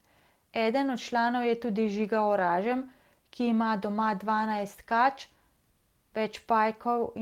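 A speech recording with a brief stretch from 2.39 to 2.49 s where the sound turns rougher and noisier without dropping out. That is a lost packet rebuilt from error correction: the decoder played low-bitrate copies carried in the following packets, about 60 ms in all, which fits three 20 ms packets.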